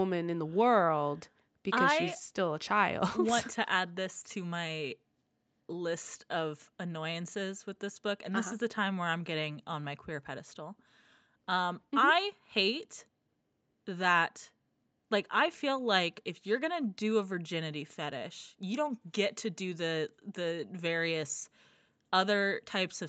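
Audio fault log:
Nothing stood out on listening to this speech, apart from the expected band limit of the call's microphone processing, which leaves nothing above 8 kHz.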